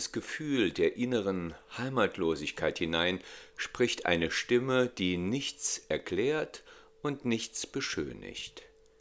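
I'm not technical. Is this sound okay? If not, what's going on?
Yes, listening through it, nothing stood out as a problem.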